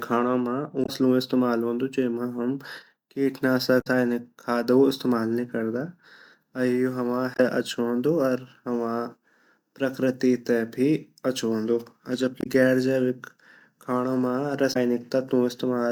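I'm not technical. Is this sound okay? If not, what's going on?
No. Damaged data in a compressed stream causes brief blips at 0.82, 3.78, 7.33, 12.40 and 14.70 s, just before "इस्तमाल वोंदु जेमा हम" first; corrupted chunks make the player lose its place.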